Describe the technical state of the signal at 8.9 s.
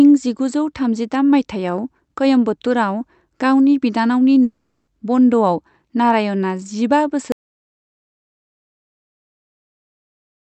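At 8.9 s the signal is silence, part of an audio dropout to silence that begins at 7.32 s and runs to the end of the clip. The speech stops abruptly mid-flow, and the gap is silent with no room tone. The likely cause is a lost input, such as a disconnected device, failed link or stray mute, while the recorder kept writing silence. Anything spoken during the gap is unrecoverable.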